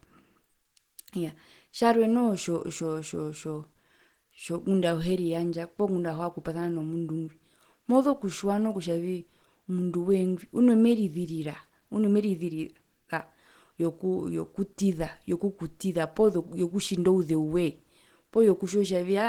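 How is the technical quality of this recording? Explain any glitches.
The recording has plainly audible coding damage from start to finish. Throughout the clip the speech sounds hoarse, rough and grainy, with a noisy texture. This is likely Opus compression at a low bitrate, near 16 kbps, in its hybrid speech mode. Bands starved of bits are filled with noise, though content still reaches about 20.4 kHz.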